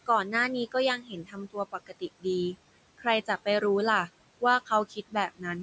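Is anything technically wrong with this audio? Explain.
Yes. Two related faults come from the noise suppressor.

Noise suppressor artifacts run through the whole clip. The suppressor pulls down whatever bands it judges to be steady noise, by about 21 dB. The room noise, about 17 dB below the speech, dips between phrases and swells back underneath them. Unlike a plain noise gate, it works band by band, so the texture of the remaining noise shifts rather than switching cleanly on and off.

Speech cut by the noise suppressor occurs from 0.97 to 2.03 s and again from 4.89 to 5.45 s. Over roughly 0.7 s in the first stretch and about a third of a second in the second, the suppressor misreads soft parts of the speech as noise and drops them by as much as about 21 dB. The affected speech sounds swallowed or faint. A packet-loss gap would cut out abruptly or leave a repeated fragment. Here the speech thins and fades with the background and never vanishes outright.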